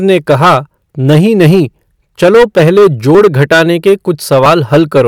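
Speech with two points where the sound jumps ahead, at 3.15 s after "नहीं नहीं चलो पहले" and at 4.46 s after "घटाने के". Each skip loses about 10 ms with no gap, likely a dropped buffer (overrun), where audio was overwritten before it was read.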